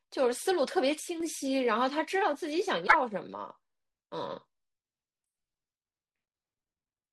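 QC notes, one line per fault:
1.00–1.20 s, one channel drops out: the speech abruptly falls by about 6 dB for roughly 0.2 s, then snaps back to its earlier level with no fade either way. The likely cause is one side of the stereo pair going silent. When the two channels are folded to mono, material shared by both loses half its amplitude, which is the 6 dB step heard here. Anything carried only by the missing side would vanish for that stretch.
2.86–2.95 s, broken MP3 bit reservoir: an 84 ms disturbance where the speech skips forward and the next moment comes out garbled rather than clean audio. The likely cause is lost MP3 frames. The span fits a few 26.1 ms frames going missing. Each MP3 frame can borrow bytes stored in earlier frames, so after a cut the decoder reaches back into the gap and reads unrelated data. The first frames after the cut decode into this junk before proper audio resumes.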